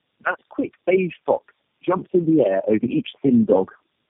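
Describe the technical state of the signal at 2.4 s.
At 2.4 s the speech sounds rough, muffled and warbly, with nothing above 3.4 kHz. This is tandem speech coding: four low-rate speech codecs in a row, ending in G.729A, each re-encoding the previous one's degraded output. The level is also swelling, voice and background together. This is automatic gain rising, running from 1.84 s to 3.77 s after "quick beige fox", with the gain climbing by about 7 dB after the level was judged too quiet.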